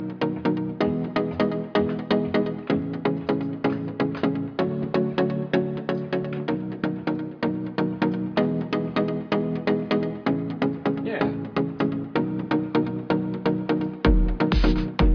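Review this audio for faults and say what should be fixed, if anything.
Nothing in the audio needs fixing. No fault can be heard anywhere in the clip, so it can stay as it is.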